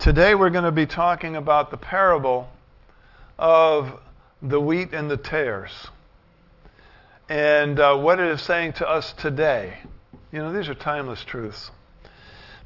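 No technical faults are audible.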